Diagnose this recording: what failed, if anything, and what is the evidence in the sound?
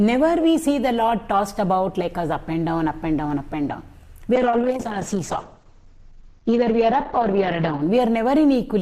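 Call bitrate drop, codec stage, 4.36 to 7.87 s: sound turns coarse and muffled, and the spectrogram empties above 8 kHz, fitting an encoder starved toward 8 kbps.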